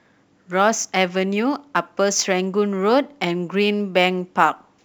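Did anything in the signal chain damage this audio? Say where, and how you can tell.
Yes: sample clock jitter, present throughout, at the converter. The clock wanders by roughly two microseconds, so samples land early or late. Steep, loud speech gives the largest errors, a hiss about 35 dB below the signal that rises with bright sounds and vanishes in pauses.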